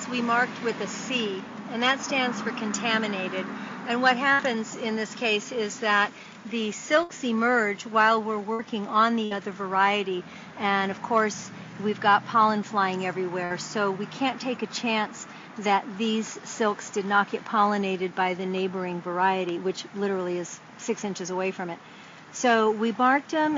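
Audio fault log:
4.33–4.42 s, 7.03–7.12 s, 8.53–8.62 s, 9.25–9.34 s and 13.45–13.53 s: burst of packet loss. At each point roughly 60 ms of audio never arrived in time. The receiver extended the last sound it had for about 55 to 60 ms while lowering its level, so each gap sounds like a short held buzz or hiss that fades. The sound then picks up further on, with that 60 ms stretch gone.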